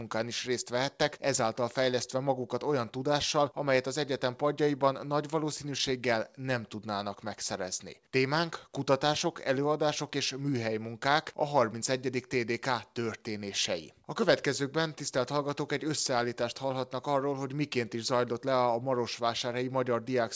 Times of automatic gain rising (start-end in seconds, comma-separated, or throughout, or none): none